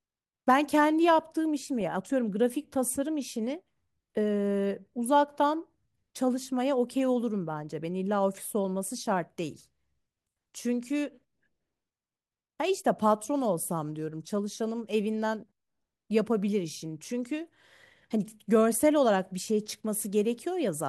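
DAB burbling at 1.81–1.93 s, 15.49 s and 17.05–17.09 s: residual bit errors corrupt MP2 sub-bands, so the speech picks up short blips of noise in single sub-bands.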